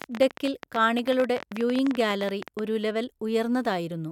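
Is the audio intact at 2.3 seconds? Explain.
No. At 2.3 seconds the speech sits under a train of clicks that runs from 0.02 to 2.60 s. Roughly forty sharp, similar pulses arrive at about 14.8 per second, spaced irregularly. They peak at about 10 dB above the speech, so they tick and pop over it and through the pauses. The train stops just before "ഒരു ലെവൽ". The likely cause is interference from nearby equipment or a faulty connection or power supply injecting repeated pulses.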